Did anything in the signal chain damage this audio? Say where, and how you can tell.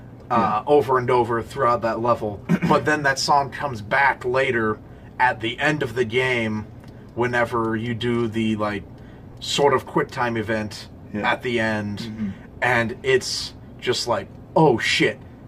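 Yes. Lost LE Audio frames at 9.32 to 9.34 s, on the Bluetooth link feeding the LC3 decoder. About 20 ms of sound turns into a brief noisy smear, which fits two lost 10 ms frames that the decoder concealed by repeating the last spectrum with random signs.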